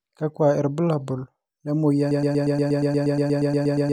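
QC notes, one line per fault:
2.11 s to end, broken-record loop: The playback or stream path likely stalled and kept re-sending the last fragment it held, rather than moving on to new audio. Right after "irbulabol le", a slice of about 0.12 s repeats exactly, back to back, 16 times until the clip ends. This produces a rapid, machine-like stutter instead of continuing speech, and whatever should have followed in those final 1.8 s is missing.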